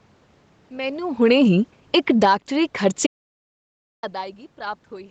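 From 1.09 s to 2.4 s, automatic gain falling pulls the level down. The gain control judged the input too loud and backed off its gain step by step, by about 10 dB in all. The speech and the room noise behind it sink together, so the whole scene seems to recede. This is not the talker moving. The slide is smooth and takes more than a second, and the background drops along with the speech.

At 2.31 s, just before that fall ends, automatic gain rising takes over and runs to 2.75 s. The controller now judged the input too quiet and raised its gain by about 5 dB over less than half a second. Speech and background swell back up together. The level was cut and then partly restored within a short span, so it seems to dip and recover unevenly.

From 3.07 s to 4.03 s there is an audio dropout to silence lasting 0.96 s. The speech cuts off abruptly mid-flow. The gap is silent, with no room noise left under it. 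The speech then resumes just as abruptly. Anything said in that second is lost. The likely cause is that the input was lost for a moment, through a disconnect, a failed link or a brief mute, while silence kept being written.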